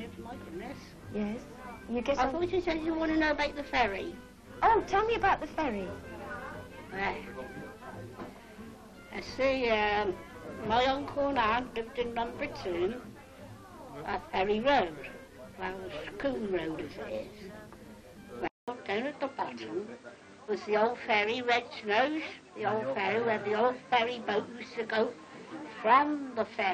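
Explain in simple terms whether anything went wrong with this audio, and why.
At 18.48 s the sound drops out for a fifth of a second. After that, it turns duller to the end. Nothing above 8.8 kHz remains, and a faint new hiss appears. Loudness stays about the same. This is likely an input switched to a poorer device.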